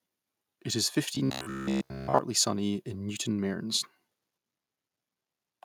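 Robotic sound from repeated short buffers, 1.15 to 2.19 s: speech becomes a rigid metallic buzz at 66.8 Hz, likely a 15 ms buffer looping while most audio is skipped.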